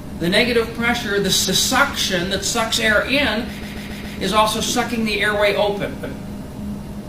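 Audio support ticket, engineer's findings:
Repeated frames: stutters at 1.44–1.68 s (232 ms block replayed once), 3.58–4.14 s (139 ms block replayed four times), 5.99–6.18 s (186 ms block replayed once). Compressed frames duplicated upstream of the decoder, lengthening playback. Waveform shows identical copied segments.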